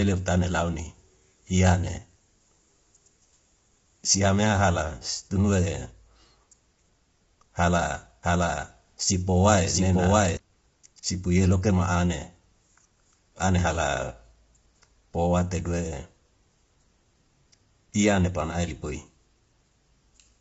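Right from the start and all the way through, the speech has a rough, grainy texture. There's a hiss-like fuzz sitting between the harmonics, and the top end stops dead at 7.7 kHz. That's the signature of low-delay AAC compression, likely AAC-ELD as used on video calls, run at a low rate. The sound points to something around 24 kbps. Its very short frames can't separate the pitch harmonics cleanly, so the gaps between them fill with noise.

From 8.23 s to 10.37 s there's a doubled audio track. A second full-band copy of the speech runs roughly 700 ms behind the original, at about the same loudness. It has no reverb tail or room colouring, and it cuts in and out abruptly at those two points. The likely cause is the same signal reaching the mix twice, once through a slower capture path that lags behind the main one.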